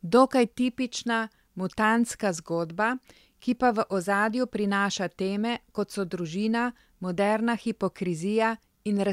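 Nothing technical trips up this bit of speech; there's no fault to point to anywhere in it, so there's nothing to time or trace to a cause.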